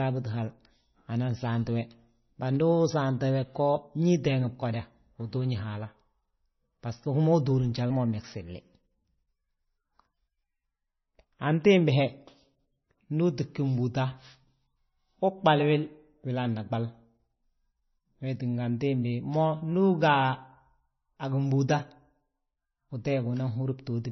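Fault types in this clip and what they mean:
Low-bitrate audio saved at a high bitrate: The speech keeps the artefacts of a 23.2 kbit/s MP3 encoding for the whole clip. That fits an earlier MP3 pass at a very low bitrate. The file was likely re-saved at a high bitrate, which cannot restore what the first pass removed.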